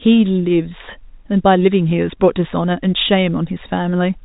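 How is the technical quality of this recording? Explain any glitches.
No glitches can be heard.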